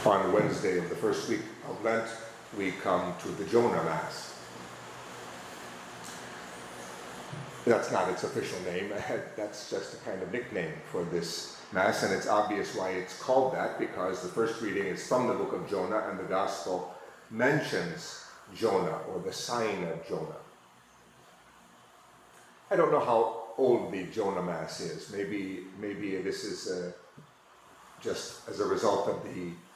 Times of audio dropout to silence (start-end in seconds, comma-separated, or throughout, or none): none